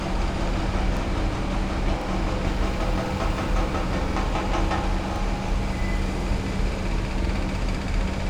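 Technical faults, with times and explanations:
0.97, 2.02, 3.06, 4.11, 5.16, 6.21 and 7.26 s, overlapping chunks: at each of these joins the audio jumps back and plays the last 48 ms a second time, so each event lasts about 48 ms. The audio is cut into 1.0 s chunks, but each new chunk begins before the previous one has finished. The replayed sliver creates a discontinuity at every boundary, heard as a click or brief stutter recurring roughly once per second.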